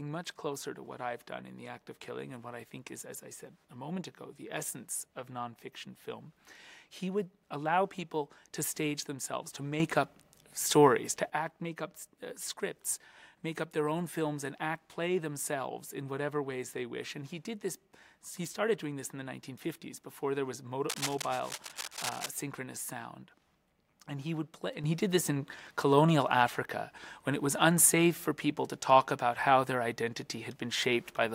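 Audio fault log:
9.8–11.3 s and 24.84 s to the end, sudden gain jump: the level leaps up by about 9 dB in the first span and about 7 dB in the second, with the background noise rising in step, because the whole signal is lifted. The first span drops back abruptly at 11.3 s. The instant, unramped change most likely comes from a digital gain setting or bit shift applied from one sample to the next.
20.89–22.31 s, cable scratch noise: dense, ragged bursts of scratching and rustling sit over the sound, only a little quieter than the sound itself. The irregular texture suggests contact resistance fluctuating quickly, likely from a worn cable, connector or control being moved. That fluctuation modulates the signal path and adds these uneven noise bursts.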